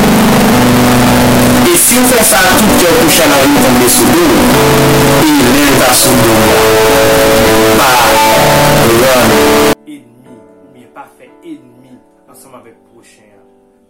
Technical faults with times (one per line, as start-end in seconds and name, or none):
0.00-9.73 float read as integer